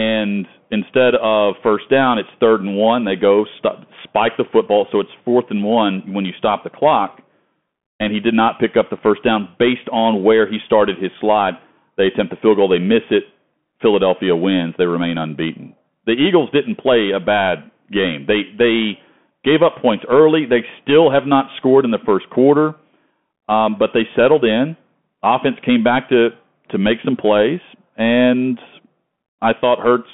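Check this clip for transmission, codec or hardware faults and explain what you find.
One codec fault runs through the whole recording: the speech has passed through a Bluetooth CVSD headset codec. From start to finish the audio sits in a narrow line band of roughly 150 Hz to 3.4 kHz, with nothing above 3.8 kHz, which fits a 64 kbps one-bit stream. CVSD codes each sample only as a step up or down with an adapting step size. Loud, fast-rising high content outruns that step and distorts, s sounds turn scratchy, and a granular hiss lies under the speech. That plainly audible grit and slope distortion is what separates it from simple telephone band-limiting, which would sound narrow but clean.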